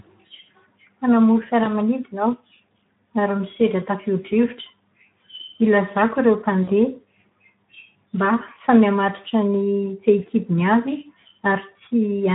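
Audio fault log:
throughout Speex codec: the speech sounds hoarse and grainy, with a thin, noisy edge. This fits a low Speex setting of about 11 kbps, where the CELP coder has too few bits to model the excitation, so the fine structure of each sound is replaced by coarse noise.
1.63 to 1.71 s and 6.63 to 6.70 s, VoIP packet loss concealed by the speech codec: the sound is smeared into a short buzzy tone or coloured noise that fades, then stays weak briefly afterwards. About 20 ms and 40 ms of audio went missing, and the decoder filled each gap by repeating its last pitch and filter at falling gain.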